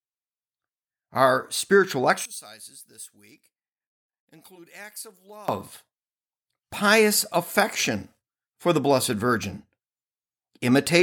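From 2.25 to 5.48 s the speech drops by about 21 dB and turns faint. The centred voice cancels when the channels combine. The likely cause is one channel inverted: reversed polarity on one side removes what both share.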